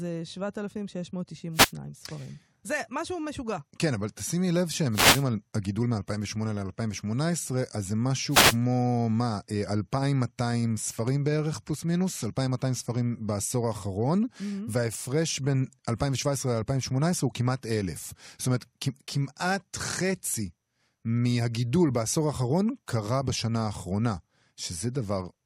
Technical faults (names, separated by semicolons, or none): wireless microphone noise hit